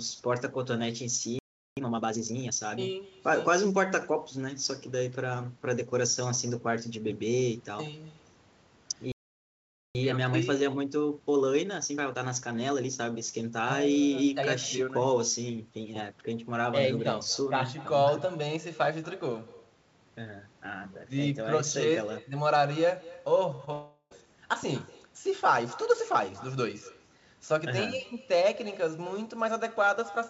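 Echo with no canceller runs through the whole speech clip: a quieter, thinner copy trails each phrase by roughly a fifth of a second at about 21 dB down, because the far end's loudspeaker feeds its microphone and nothing removes it. A playback stall silences the sound from 1.39 to 1.77 s (380 ms) and again from 9.12 to 9.95 s (830 ms), likely because the player ran dry or its thread was blocked. Time-compressed catch-up follows each stall, hurrying the audio at unchanged pitch as small pieces are cut and cross-faded: 1.5 times speed from 1.77 to 2.53 s, and 1.15 times from 9.95 to 12.95 s. Short concealed packet loss smears the sound at 23.56 to 23.61 s and 23.65 to 23.69 s, where 20 ms gaps were bridged by extending the preceding sound before blending back. A long network dropout follows from 23.73 to 24.27 s, likely a stretch where no packets arrived: the receiver stretches the last sound into a fading buzz or hiss for about 380 ms, leaves a brief 40 ms silence, and resumes with a small piece skipped. 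Nothing is present above 8 kHz, consistent with a wideband call codec such as G.722.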